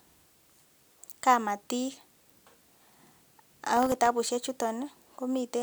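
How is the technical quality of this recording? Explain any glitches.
The recording has one clear glitch: a processor overload crackle from 3.77 to 4.07 s. For about 0.3 s, the processor running the audio appears unable to finish its work in time. Buffers under a millisecond long, about 15 of them, were missed and went out as silence. Each tiny hard-edged gap produces a tick, and together they form a gritty tearing over the speech. It differs from clipping distortion because the grit follows the timing breakdown rather than loud peaks, and it stops abruptly once the load clears.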